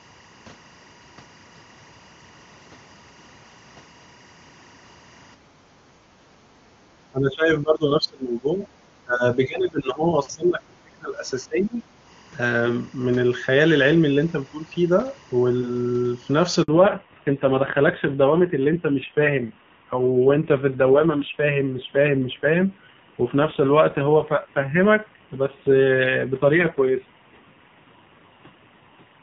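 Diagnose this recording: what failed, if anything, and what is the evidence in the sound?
Analogue wiring: linear timecode is leaking from a neighbouring cable. A steady chirping warble alternating near 1 and 2 kHz sits roughly 35 dB under the speech throughout, which fits 23.976-frame code.

Call processing: the echo canceller clamped the microphone while the loudspeaker played, so the room background is gated. It sinks by about 7 dB from 5.36 to 6.24 s, then returns.

Call processing: the speech itself dips by around 20 to 25 dB in pieces at 6.96–8.67, 9.04–10.06, 10.32–11.16 and 11.46–11.83 s. The likely cause is speech suppressed in double talk by the echo canceller.

Network: a handover gap left 60 ms with no speech frames, so the speech cuts to silence at 16.62 s and resumes at 16.68 s.

Codec: the call suffered a fallback to narrowband, from AMR-WB at 23.85 kbit/s to AMR-NB at 5.9 kbit/s, at 16.68 s. 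Up to that point the wideband codec sounds clean, with at most faint codec damage. From there on nothing above 4 kHz remains, and the speech turns duller and rougher.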